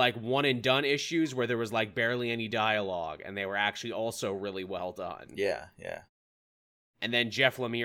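Listening to this speech recording, nothing technically wrong stood out.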